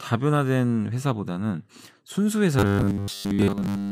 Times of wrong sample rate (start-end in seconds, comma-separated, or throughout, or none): none